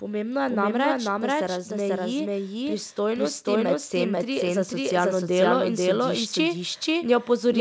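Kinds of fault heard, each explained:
Doubled audio track: Every phrase is followed by a clean second copy at about the same loudness, roughly half a second later, with no reverb tail or room colour. The same speech was likely captured twice, once through a slower path, and mixed together.
Automatic gain rising: From 2.96 s to 4.98 s the voice and the background noise swell together by about 4 dB over two seconds. The automatic gain control judged the input too quiet and gradually raised its gain.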